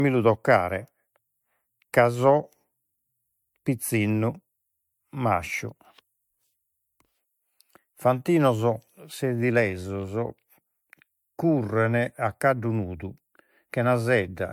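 Speech that sounds swirly, smeared and hollow throughout, with consonant attacks blurred and a watery texture more pronounced than a single moderate-bitrate encode would leave, the mark of generation loss. It most likely comes from repeated lossy coding, consistent with MP3 at around 96 kbit/s applied about four times over. Each decode and re-encode quantises again on a shifted frame grid, so noise and spectral holes accumulate. The top end stops at about 20.1 kHz.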